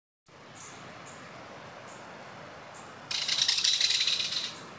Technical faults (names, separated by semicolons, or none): comfort noise in place of the background